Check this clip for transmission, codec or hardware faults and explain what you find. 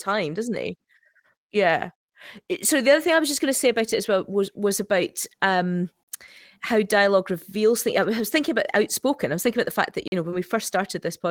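Two transmission faults are audible in this speech.

At 6.03 to 6.08 s, between "was was about um" and "how dialogue reveals things", and again at 10.08 to 10.12 s, between "about the fact that" and "you know when we", the sound drops into a 44 ms silence. These are gaps between chunks: playback pauses at each join in audio delivered in 4-second pieces.

At 10.31 to 10.34 s, just after "that you know when", there is a brief smear. This is short concealed packet loss, where roughly 20 ms never arrived and the receiver patched the hole by extending the preceding sound.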